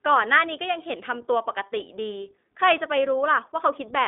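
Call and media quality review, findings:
iLBC codec damage throughout. Band limited to about 250 Hz to 3.6 kHz. Plainly rough, synthetic texture. Each 20 ms frame coded independently, which fits the 15.2 kbps mode. Probable component: narrowband VoIP leg.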